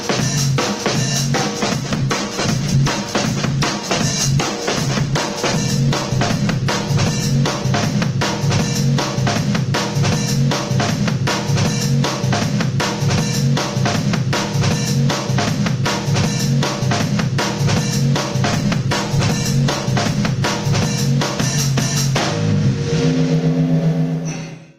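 The audio shows gain pumping throughout. The level ducks under every loud sound and recovers, by about 15 dB. Loud and quiet passages sit unnaturally close in level, and the result sounds squashed. The likely cause is input gain set far too high, with a fast limiter or compressor clamping down on each peak. There are also two call bitrate drops. The first runs from 1.58 to 8.75 s. The sound turns coarse, watery and dull, and it is worst for about 5.4 s. That fits the encoder falling from around 48 to 12 kbps and trimming the high frequencies. The second runs from 18.48 to 21.19 s, with the roughest stretch lasting about 1.2 s. It suggests a fall from around 48 to 14 kbps. Both follow a drop in the call's bandwidth estimate, and clarity returns as the bitrate recovers.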